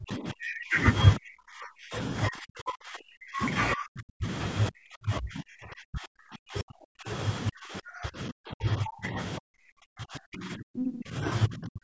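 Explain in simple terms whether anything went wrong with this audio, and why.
The talker's voice keeps dropping out almost to silence at 0–0.77, 1.17–1.97, 2.28–3.44, 3.75–4.28, 4.7–7.1 and 7.5 s to the end, likely speech suppressed in double talk.

A brief scrap of another voice, nearly as loud as the talker, appears at 10.78–10.92 s, likely the other side's voice leaking through.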